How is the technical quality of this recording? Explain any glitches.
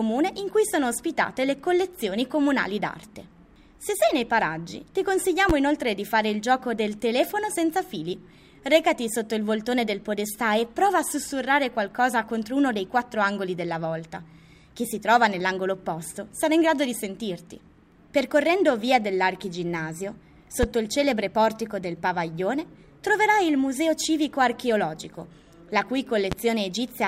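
The recording has one recurring fault, a loud pop, heard three times: at 5.50 to 5.52 s, 20.63 to 20.66 s and 26.32 to 26.34 s. Each is a single sharp burst lasting under 30 ms and peaking roughly 15 dB above the surrounding sound, which continues uninterrupted beneath it. The likely cause is a sudden voltage step or pulse, such as static or a switching or driver glitch, entering the signal chain and being shaped by the circuits that follow into an abrupt thump.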